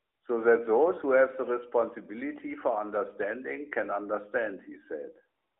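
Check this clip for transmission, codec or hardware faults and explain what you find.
Nothing stood out on listening to this speech clip.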